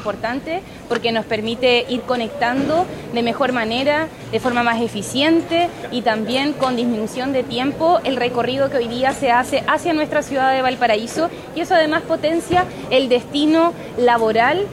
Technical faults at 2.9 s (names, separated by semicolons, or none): video or display buzz